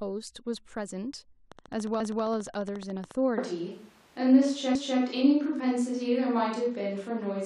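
Interference from nearby equipment or a faulty connection is likely injecting pulses from 1.52 to 3.12 s, producing a train of clicks. About twenty near-identical clicks arrive at a regular 14.1 per second, peaking roughly 5 dB above the speech and ticking steadily over it.

At 3.38 s the close microphone's signal likely drops out and the recording jumps to a distant microphone, staying there until the end. The speech abruptly turns roomy and hollow with thinner bass. The level barely changes, but room noise rises to around 35 dB below the speech.

From 4.75 to 5.00 s, overlapping chunks appear: the audio was handled in 2.5 s blocks, and this block began before the previous one had finished. A 250 ms stretch therefore plays twice, heard as a stutter at the join.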